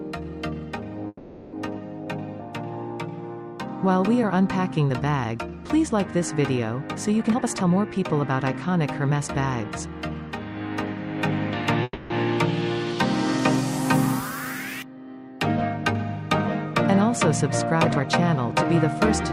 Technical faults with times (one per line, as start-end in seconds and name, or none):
1.07-1.54 call audio freeze
7.23-9.65 jitter buffer speed-up
11.83-12.12 call audio freeze
17.84-18.52 jitter buffer speed-up